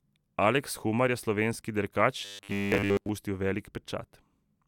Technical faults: robotic sound from repeated short buffers

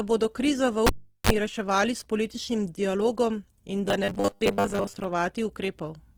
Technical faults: Opus compression; cable pulled and plugged in; robotic sound from repeated short buffers

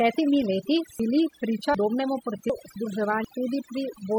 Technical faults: overdone noise removal; audio missing between chunks

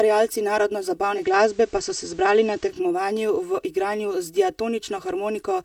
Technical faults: channel delay (comb filtering); digital radio blending to analogue; dropped samples

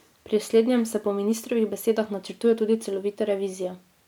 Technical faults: none

